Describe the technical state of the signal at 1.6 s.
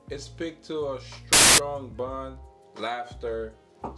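File tags played as audio run from 1.33 to 1.58 s, ending just before 1.6 s: an embedded cover picture's compressed bytes were decoded as sample values, giving a hard-edged burst of very loud white noise that stops abruptly there.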